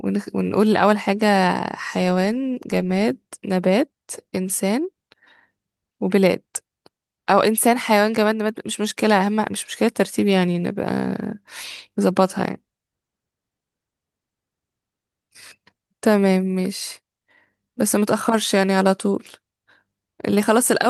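Nothing stood out on listening to the speech here; no technical fault caught the ear at any point.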